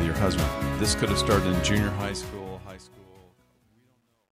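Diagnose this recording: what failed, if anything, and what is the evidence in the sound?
Truncation distortion on the fade-out at the gain stage: gritty from 1.73 s, worst from 2.76 s, which fits undithered 11-bit steps. The waveform shows square staircases.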